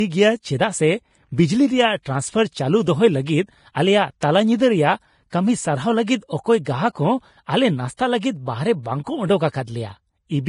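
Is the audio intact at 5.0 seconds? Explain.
No. At 5.0 seconds, as across the whole clip, the speech carries the marks of heavy lossy coding, likely Vorbis compression at a low setting, which fits a bitrate around 30 kbps. The encoder keeps only a smooth spectral outline plus a coarsely quantised residue, so fine treble detail is swapped for noise of similar energy. Nothing survives above 10.6 kHz, and the upper range sounds hissy and grainy, with roughened tone and smeared consonant onsets.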